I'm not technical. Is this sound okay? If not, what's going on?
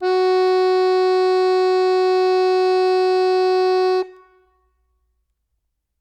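No. From 0.14 to 5.96 s the music has clock slip clicks: a soft rattle, roughly twenty ticks per second, likely from two unsynchronised device clocks.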